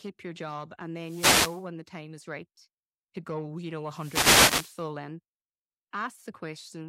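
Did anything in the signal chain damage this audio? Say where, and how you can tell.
Yes, two wireless microphone noise hits occur in the analogue radio link ahead of the converter. The first runs from 1.01 to 1.66 s, between "your job and" and "the time is right". The second runs from 3.87 to 4.89 s. Each is a swish of static rising over the speech as the FM carrier fades through reflection cancellation. Unlike a network or codec dropout, the sound is overlaid with hiss rather than cut to silence or smeared.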